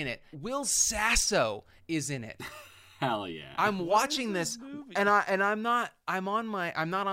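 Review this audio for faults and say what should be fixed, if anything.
Sample clock jitter runs through the whole speech clip: a fine hiss and roughness that rises on loud, bright passages and vanishes in pauses. Timing errors of around a microsecond hit steep waveform slopes hardest, leaving error roughly 35 dB below the signal. Clock the converter from a stable, low-jitter reference.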